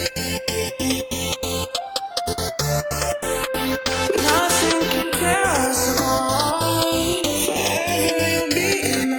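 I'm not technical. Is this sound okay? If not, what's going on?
No. Throughout the clip there's a slow, swirling, whooshing flanging. This is channels drifting apart: the left and right sides were recorded on devices with slightly different clocks, so one slips gradually behind the other, by about half a millisecond by the end.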